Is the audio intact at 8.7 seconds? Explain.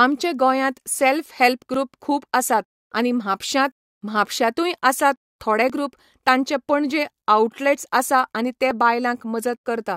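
No. At 8.71 s, just after "आसा आनी", an overlap between stream segments drops a sliver of audio, heard as a tiny skip, seen as a waveform jump and thin vertical spectrogram line.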